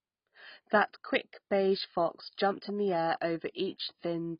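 Heavy AAC compression, likely from AAC-LC running at a very low rate, something in the region of 16 kbps, damages the speech from start to finish. With so few bits per frame, the encoder gives up on the top of the spectrum, so nothing survives above about 5.1 kHz, and the bands it does keep are coarsely quantised. The speech sounds dull and muffled, with sibilants turned smeared and fizzy and a warbling texture on sustained sounds.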